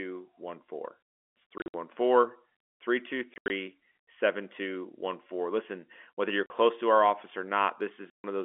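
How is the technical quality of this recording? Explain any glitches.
The speech is marred by four dropouts. Packet loss filled with silence at 1.58–1.74 s, 3.34–3.50 s, 6.46–6.50 s and 8.10–8.24 s: lost packets were replaced by silence, leaving hard-edged gaps. The gaps come in steps that fit 20 ms packets, through the narrow G.711 telephone band.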